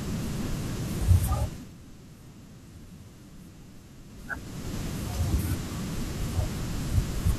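A speech clip in which, from 1.37 to 1.75 s, a fast ticking zipper noise rides on the audio as the level drops by roughly 15 dB. Zipper noise happens when the gain moves in unsmoothed 2 dB steps, around twenty per second, each step clicking.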